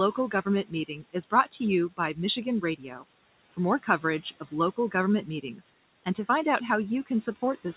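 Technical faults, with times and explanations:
Throughout: noise suppressor artifacts. Steady background is pulled down by about 17 dB frame by frame, so residual noise dips between phrases and rises under speech.
0.17 to 1.47 s: speech cut by the noise suppressor, just before "to you". Roughly a third of a second of quiet speech is misread as noise and dropped by up to about 17 dB, sounding swallowed.
1.89 to 2.18 s: speech cut by the noise suppressor, right after "to you". About a tenth of a second of soft speech falls by up to about 12 dB and turns faint.
2.62 to 3.05 s: speech cut by the noise suppressor. Around a third of a second of low-level speech is gated with the background, down by up to about 14 dB.
3.51 to 4.94 s: speech cut by the noise suppressor. Scattered soft portions totalling about a fifth of a second drop by up to about 17 dB.
5.43 to 5.65 s: speech cut by the noise suppressor, just before "and to find out". 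About a tenth of a second is turned down by up to about 10 dB.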